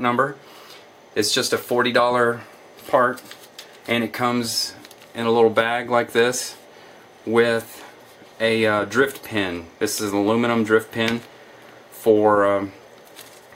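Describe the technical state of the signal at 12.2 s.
At 12.2 s the signal is intact, with no audible fault at that moment.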